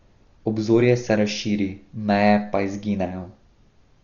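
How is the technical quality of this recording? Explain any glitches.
The technical quality is poor: heavy compression damage runs through the whole speech recording. Throughout, the sound is dull, with nothing above 7 kHz and a rough, fluttering noise around tones, most likely Dolby Digital compression at a starved bitrate, which fits roughly 40 kbps. The encoder narrowed the band and left many frequency lines without detail, so the decoder filled them with noise. A spectrogram shows a hard ceiling at 7 kHz and grainy, speckled patches around the harmonics.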